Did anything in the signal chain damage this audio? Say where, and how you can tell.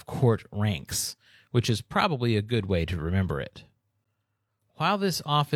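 Yes: a gap between stream segments at 4.04 s, just after "way to remember it". An 11 ms hard-edged silence falls where two 4.0 s segments meet in playback, their timestamps leaving a hole filled with silence. Unlike a dropout, no audio is lost; the sound resumes intact.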